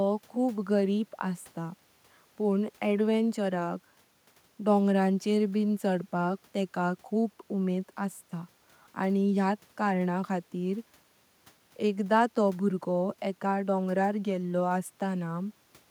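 A speech recording with no technical faults to point to. Nothing in it calls for a time or a cause.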